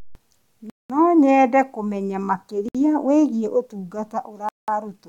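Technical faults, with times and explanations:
0.70–0.90 s, 2.69–2.75 s (right after "nyende kũmenya") and 4.49–4.68 s, Bluetooth stall: the speech drops to full silence for 199, 61 and 192 ms, then resumes. This is likely the headphone buffer running dry while delayed wireless packets were resent.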